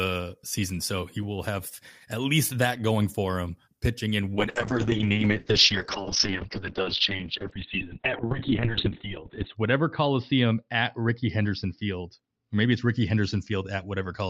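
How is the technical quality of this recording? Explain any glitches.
Quality falls partway through because of a call bitrate drop. From 4.36 s, right after "for him pitching in", to the end, the encoder's rate falls from 32 to 8 kbps, bottoming out for 5.12 s. Coarser coding turns the speech rough and watery, and the audio bandwidth narrows from 20 kHz to 4 kHz, making it muffled. Unlike packet loss, the sound never drops out.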